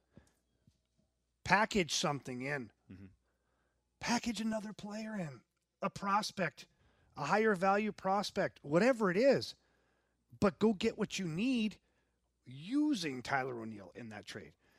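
Speech, with a stretch of channel delay (comb filtering) from 4.53 to 6.79 s, ending just before "a higher value prospect". Over that span the sound turns hollow and phasey. One channel arrives around 5 ms behind the other, and when the pair is summed to mono the shared content cancels at evenly spaced frequencies. This cuts fixed notches into the spectrum, starting at roughly 100 Hz and repeating up through the range.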